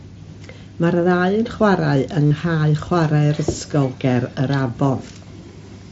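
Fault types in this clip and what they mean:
concealed Bluetooth headset packet loss: At 1.03 s there is only a barely noticeable blip. From 2.27 to 2.31 s the speech gives way to a brief buzzy tone held at steady level, with a slight warble as the real audio resumes. Voice packets from headset to phone went missing, and the receiver filled each gap by repeating the best-matching recent stretch of waveform. The 45 ms run fits about six lost frames; the 7.5 ms gap fits one.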